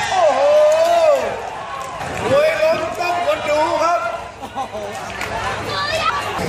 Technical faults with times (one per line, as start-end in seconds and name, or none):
6.09-6.13 damaged data in a compressed stream